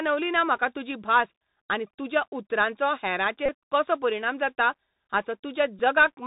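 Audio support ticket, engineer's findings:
Bluetooth CVSD headset codec, whole clip: band-limited speech, scratchy sibilants, granular hiss beneath. Spectrogram shows a hard ceiling at 4 kHz and a fuzzy noise floor; waveform shows slope-overload rounding on loud peaks. Fits 64 kbps CVSD narrowband headset link.

Bluetooth headset packet repeated, 3.46–3.50 s, after "भास आनी तुज्या उतरांचो", before "कसो परिणाम जाता": short buzz near 267 Hz, about 26 ms lost, fitting seven repeated 3.75 ms packets. Spectrogram shows harmonic comb; waveform shows a short repeating cycle. Second instance at 5.79 s: two repeated packets, about 7.5 ms lost.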